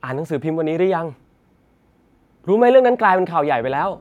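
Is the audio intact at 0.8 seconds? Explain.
Yes, the speech at 0.8 seconds is intact, with no dropout, click, distortion or other fault at that moment.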